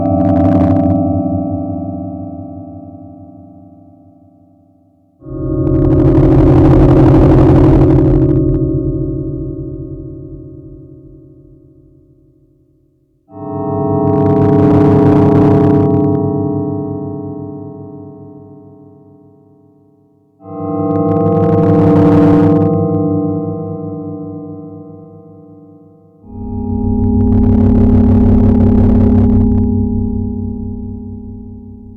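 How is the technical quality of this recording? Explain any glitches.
The recording has repeated hard clipping, in five bursts: 0.06–0.96 s (about 6 dB over), 5.67–8.56 s (about 13 dB, the harshest), 14.08–16.15 s, 20.91–22.95 s and 26.93–29.64 s (each about 8 dB). The sound is driven past the maximum level a stage can pass, so its peaks are sliced flat, giving crackly, fuzzy distortion on loud moments. The waveform shows squared-off, flattened tops. The spectrogram shows bright harmonic smearing reaching up into the high kHz range during each burst.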